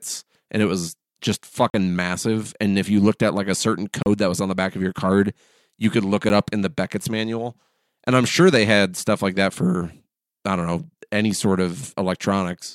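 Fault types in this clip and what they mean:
block of digital silence: Stretches of output samples came out as zeros, the kind of gap left when the audio program fails to fill its buffer in time or produces invalid values. The speech drops to dead silence and snaps back with no fade: a 40 ms hole at 1.70 s after "and it was just", a 34 ms one at 4.03 s before "that was on the", and a 10 ms tick at 6.29 s before "up in the".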